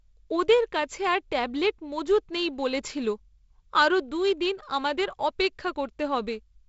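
No technical faults are audible.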